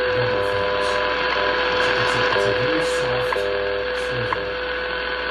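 Nothing in the audio stands out as a technical problem, so there's no fault here to point to.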